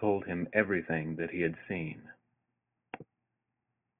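Nothing goes wrong anywhere in this bit of speech, so there's no fault to point to at any moment.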